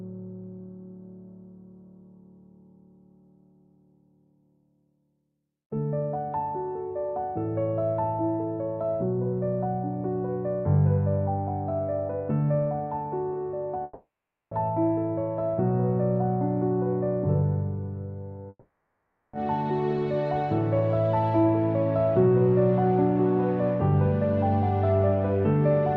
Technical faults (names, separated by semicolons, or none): long network dropout